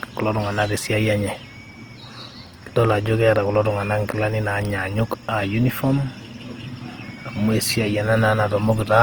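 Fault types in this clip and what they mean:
Opus compression: The speech sounds rough and grainy all the way through, with noisy texture where detail should be. That's likely Opus in its music mode filling starved bands with noise, which fits a low bitrate around 24 kbps, though the top still reaches about 20 kHz.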